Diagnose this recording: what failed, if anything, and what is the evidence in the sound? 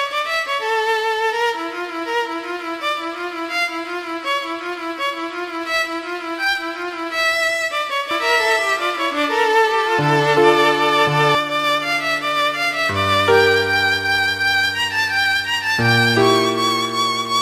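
A doubled audio track runs from 8.11 to 11.35 s. A full-band copy trails the original by about a second, at roughly equal level. It has no decay and starts and stops abruptly. The likely cause is a second capture path or a misaligned edit.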